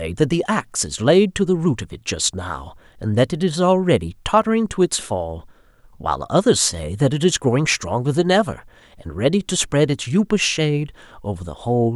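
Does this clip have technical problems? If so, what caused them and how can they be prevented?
No, there are no technical problems in this clip.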